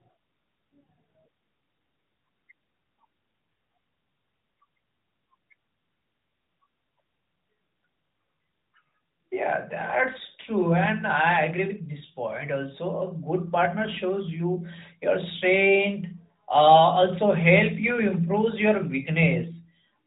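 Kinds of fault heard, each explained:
Nothing in the recording stood out as a fault on listening.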